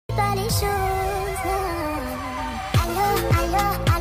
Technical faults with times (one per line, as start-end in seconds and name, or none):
none